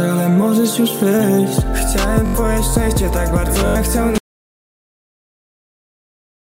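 The audio stutters twice from a repeated buffer, at 2.26–2.35 s and 3.67–3.76 s. A 21 ms slice, which fits a 1024-sample buffer, plays four extra times, and about a tenth of a second is lost. An audio dropout to silence starts at 4.18 s and lasts to the end, most likely from lost input.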